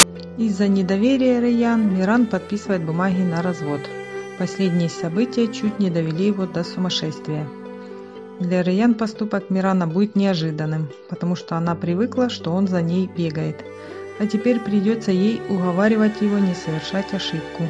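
At the very start, from 0 to 0.03 s, the player has read an embedded cover picture in the file's tag block as if it were audio samples, a case of file tags played as audio. That compressed image data decodes to very loud white noise, heard as a brief, harsh burst of static with hard edges before the sound proper begins.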